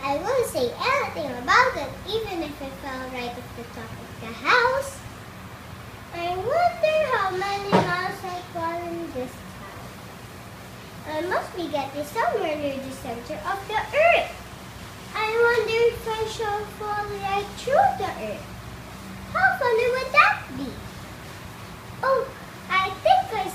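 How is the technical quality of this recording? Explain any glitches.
No glitches to point to here: nothing jumps out as a technical fault anywhere in the recording.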